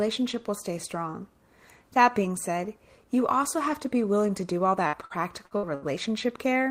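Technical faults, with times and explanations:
4.87–5.85 s, repeated packet loss (robotic sound): after "willing to do all", five gaps (longest 72 ms) are patched with repeated sound, leaving choppy speech and smeared, blocky spectrogram bands.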